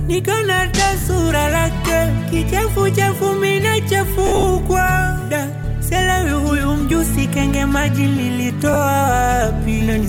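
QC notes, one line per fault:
1.00–1.04 s, 4.27–4.43 s and 8.73–8.76 s, lost LE Audio frames: brief noisy smears replace the tonal detail. The first and last gaps are 40 ms and 30 ms. The middle one is rougher, with about 110 ms missing, scattered over 160 ms, and the longest run is around 50 ms. The LC3 decoder filled each gap by replaying the last spectrum with random signs, which turns tones into noise. The gap lengths fit 10 ms frames.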